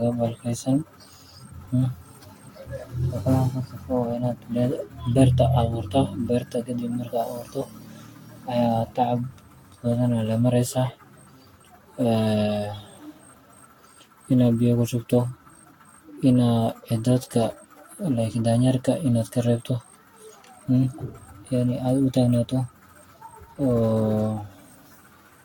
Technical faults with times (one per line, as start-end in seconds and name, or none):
0.00-25.45 generation loss